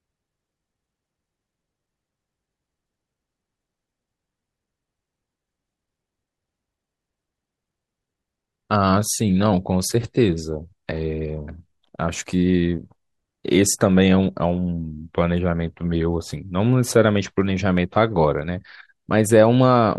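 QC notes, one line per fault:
Throughout: block size mismatch (truncated). The tail of each block is dropped between stages, leaving a 46.9 Hz buzz at the block seams, which fits 1024-sample blocks. The speech keeps its normal pace and pitch. A spectrogram shows evenly spaced vertical stripes about 21 ms apart, and the waveform shows abrupt steps at the same spacing.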